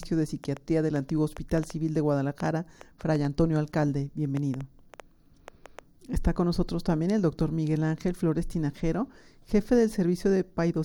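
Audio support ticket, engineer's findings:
Irregular ticking/popping, 0.03–5.80 s, about 3.8 clicks per second, around twenty in all, peaks a few dB above the audio, audible in gaps too. Train of clicks, near-identical pulses. Likely cause: external interference or a faulty connection or power supply injecting impulses.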